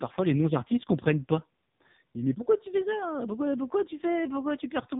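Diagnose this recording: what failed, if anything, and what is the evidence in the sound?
The codec stage failed: the whole speech clip went through the AMR narrowband mobile codec at a low rate. Nothing above 3.8 kHz survives, and the voice sounds buzzy and synthetic, which fits roughly 5 kbps. A spectrogram shows an empty band above that ceiling throughout.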